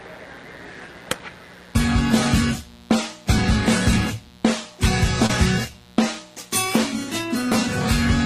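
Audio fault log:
Throughout: mains buzz. A steady, raspy buzz sits about 30 dB below the audio. Sharp switching spikes, twice per 60 Hz cycle, leaked into the signal path, so the buzz carries a dense stack of harmonics reaching up into the kilohertz range.
5.26–5.30 s and 7.50 s: short concealed packet loss. About 30 ms and 10 ms of audio never arrived. The receiver extended the preceding sound to fill each gap, then blended back in. This produces a brief smear or wobble.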